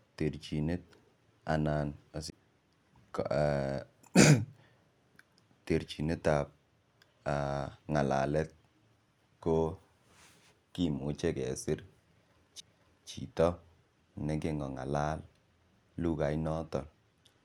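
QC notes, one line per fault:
2.30–2.32 s and 12.60 s, CD skip: a brief tick and near-silent gap, then the sound resumes from a different point rather than where it left off, unlike a plain dropout.
17.08–17.44 s, Bluetooth SBC bit pool drop: treble dulls and gritty noise rises to the end, consistent with the bit pool falling from about 31 to 15, near 105 kbps, unlike steady low-pass filtering.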